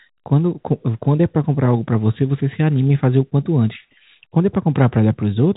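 Speech over a telephone-band channel with nothing above 3.8 kHz, consistent with G.711 telephone coding; no faults present.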